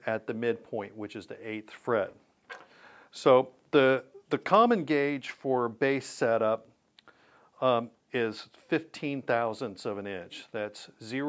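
Nothing stood out on listening; the sound carries the ordinary character of call microphone processing, with its highest content stopping at about 8 kHz.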